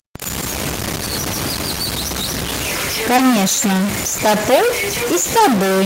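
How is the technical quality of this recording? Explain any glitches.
The recording is technically poor: a stuck-bit distortion runs through the entire speech, and the latter half carries a cluster of brief packet-loss artefacts.

Stuck bit: throughout, the speech carries added noise or distortion, and the pauses fill with noise instead of falling silent. The likely cause is a converter or data line holding one bit fixed, which shifts roughly half the samples by that bit's weight in a waveform-dependent pattern.

Lost packet rebuilt from error correction: thirteen separate 10 ms frames between 3.09 s and 5.59 s, densest around 4.18 to 4.59 s. Each lost packet was replaced by the low-bitrate copy carried in the following packet, so there is no gap. Those moments sound briefly rougher and noisier.

Short concealed packet loss: from 3.16 to 3.19 s, 20 ms went missing, and at 5.39 s, 10 ms went missing. 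In both cases the decoder extended the preceding sound and crossfaded back. The result is a fleeting smear or wobble.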